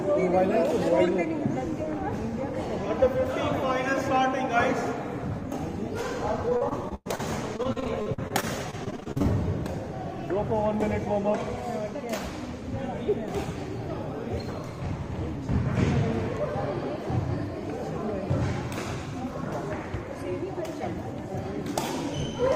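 Repeated packet loss (robotic sound) hits the audio from 6.49 to 7.21 s and again from 7.57 to 9.26 s. Short holes, up to 107 ms in the first burst and 41 ms in the second, are patched by stretching the preceding sound. The result is choppy, with pieces missing. On a spectrogram these patches appear as smeared, repeated harmonic bands with abrupt edges, and the waveform shows chopped, self-similar segments.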